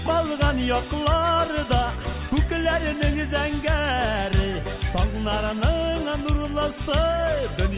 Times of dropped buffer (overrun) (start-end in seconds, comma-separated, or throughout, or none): none